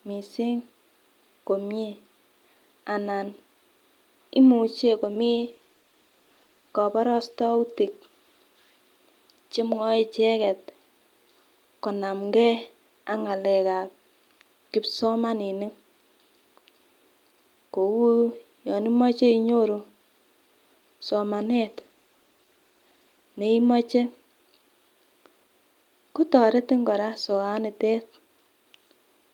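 From 4.85 to 9.13 s and 21.36 to 23.33 s, call bitrate drops make the speech rough and muffled, consistent with 48 falling toward 18 kbps; unlike packet loss, nothing drops out.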